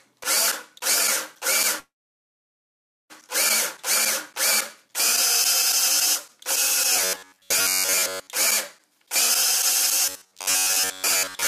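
From 1.79 to 3.12 s there is a call audio freeze. The last sound trails off into about 1.2 s of silence, likely because the jitter buffer ran empty. Playback then resumes where it stopped, 1.3 s late, with nothing lost.

From 6.93 to 8.33 s and again from 10.06 to 11.47 s, robotic sound from repeated short buffers appears. A rigid metallic buzz at 93.8 Hz sets in, likely from a roughly 10.7 ms chunk being repeated in place of most of the real audio.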